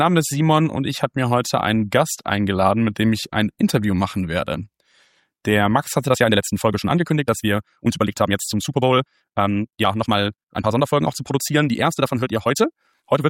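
From 6.05 s to the end, the sound suddenly runs about 1.59 times faster while its pitch stays put, turning rushed. This is a time-stretched section, likely from software squeezing the audio to fit a length by dropping short pieces.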